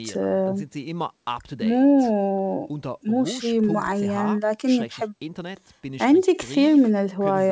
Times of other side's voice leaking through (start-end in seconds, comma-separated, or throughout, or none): none